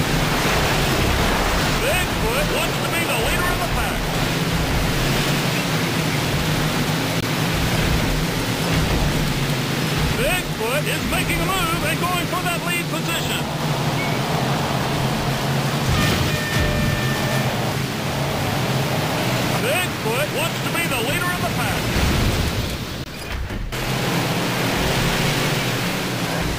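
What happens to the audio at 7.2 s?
At 7.21 s the audio drops into a block of digital silence lasting 20 ms, returning at 7.23 s. For that span the sound is replaced by silence, as when the output buffer isn't filled in time. The cut in and out has no fade, so the sound stops and restarts abruptly around a brief, dead hole. The silent floor and abrupt edges set it apart from a fade-out or a patched, concealed gap.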